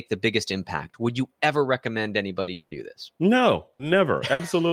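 Just after "you ever recommend", at 2.41 to 2.50 s, the last sound is held as a fading buzz or hiss for about 60 ms before the speech resumes slightly further on. This is a burst of packet loss: a few packets never arrived, the receiver stretched and faded the previous sound, and the missing portion is skipped. The same held, fading buzz or hiss recurs at 3.73 to 3.82 s and 4.33 to 4.42 s. From 2.53 to 2.74 s a longer extension of the last sound fades out over about 180 ms without dropping to silence, and the speech returns with that stretch gone. The likely cause is a long network dropout, where no audio arrived and the receiver's fill carried across the whole gap.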